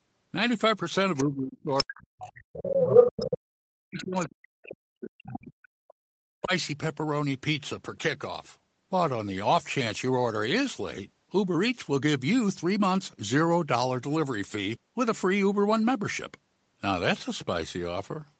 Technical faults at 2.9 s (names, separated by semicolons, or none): speech suppressed in double talk; other side's voice leaking through